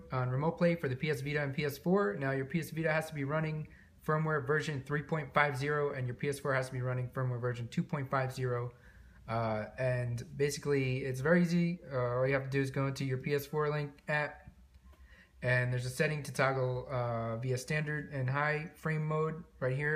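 Nothing stood out as a technical fault on listening.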